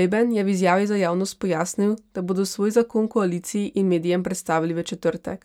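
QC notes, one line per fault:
Nothing to flag here; the speech comes through without any technical problems I can hear.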